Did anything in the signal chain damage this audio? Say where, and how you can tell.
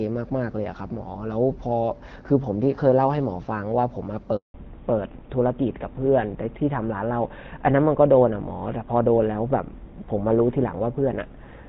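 Yes. A handover gap at 4.36 to 4.54 s is a network-stage fault. The speech collapses within a few tens of milliseconds and leaves 180 ms of silence before sound resumes. This is what happens when a call is passed from one network link to another and no speech frames arrive during the switch. The decoder has nothing to play, so that stretch of speech is gone rather than merely degraded.

From 4.54 s to the end, a fallback to narrowband is a codec-stage change. Before the gap, the speech carries energy up to about 7 kHz, which fits HD Voice at around 12.65 kbit/s with only light coding damage. Afterwards, nothing remains above 4 kHz, and the sound turns duller and rougher. That pattern points to the call being renegotiated onto an older narrowband codec, likely GSM full rate, which cannot carry the upper band at all.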